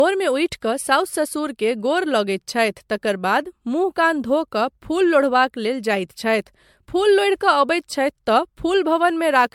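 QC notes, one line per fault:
Throughout, generation loss: the speech sounds swirly, smeared and hollow, with blurred attacks and nothing above 19.9 kHz. This likely comes from around five successive MP3 encodes that fit a 96 kbit/s rate, each requantising on a shifted frame grid so noise and spectral holes accumulate.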